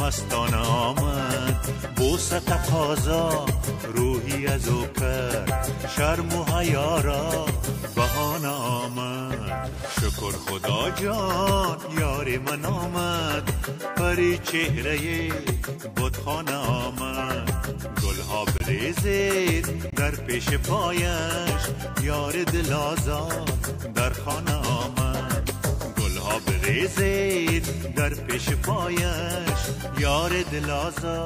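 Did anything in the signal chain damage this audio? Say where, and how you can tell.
Yes, it's the codec stage: two corrupt frames got muted, one at 18.58 to 18.62 s and another at 19.90 to 19.94 s. Each is an abrupt 42 ms hole, about one frame long. The decoder rejected the damaged frame and playback filled it with silence, keeping the timing intact.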